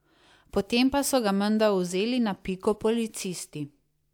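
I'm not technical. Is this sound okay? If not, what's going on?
Yes, no technical faults are audible anywhere in this speech recording.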